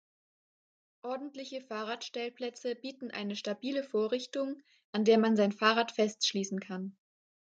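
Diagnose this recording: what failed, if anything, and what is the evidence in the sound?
Automatic gain rising in call processing: from 1.01 s to 5.3 s, speech and background swell together by about 13 dB as the gain control lifts quiet input.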